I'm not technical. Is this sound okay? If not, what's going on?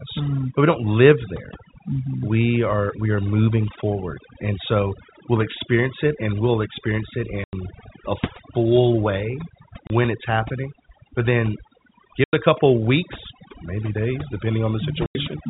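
No. Two problems stand out in this speech.

The first is overdone noise removal, and it runs through the whole clip. A cleanup tool was set too strong. It strips out background hiss, but it also eats the quieter parts of the voice. So the background drops to near silence with small twinkling specks.

The second is packet loss filled with silence. The sound travels in small chunks. When chunks go missing, the playback inserts silence. There are four gaps. At 7.44 s, after "and we'll experience it", there is a 90 ms hole. At 9.87 s, after "a full way", there is a 30 ms hole. At 12.24 s, just before "it a couple weeks", there is another 90 ms hole. At 15.06 s there is one more of 90 ms. The lengths suggest the chunks are 30 ms each, with one or three lost at a time. The telephone-style sound is expected from how the call was carried.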